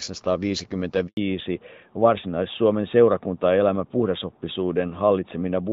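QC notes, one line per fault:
1.07–1.17 s, handover gap: the speech dies away within a few tens of milliseconds and stays silent for 100 ms while the call switches networks and no frames arrive. Unlike a packet-loss dropout, there is no smeared or repeated fragment, just clean silence followed by a changed sound.
1.17 s to end, fallback to narrowband: right after the gap, everything above 4 kHz vanishes and the speech turns duller and rougher, which fits a drop from HD Voice to a narrowband AMR mode. Unlike a plain low-pass filter, the texture also coarsens, and the change begins exactly at the handover.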